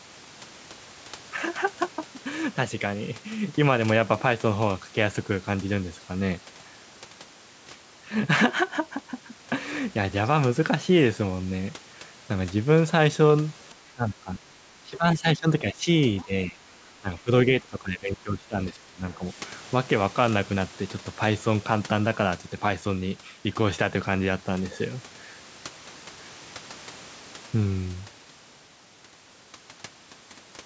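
From 13.94 to 14.55 s and again from 14.72 to 15.88 s, the speech sinks by around 15 dB. This is speech suppressed in double talk, likely because the echo canceller could not separate the near talker from loudspeaker echo while both sides spoke, and so turned everything down.

At 16.16 to 16.25 s a faint scrap of a second voice appears, about 25 dB below the speech. This is the other side's voice leaking through, likely loudspeaker sound that the echo canceller left in the microphone signal.

The suppression returns at 16.24 to 16.59 s with a shallower dip of around 10 dB. It then sinks by around 15 dB again at 17.0 to 17.31 s and across 17.61 to 19.37 s, the longest stretch.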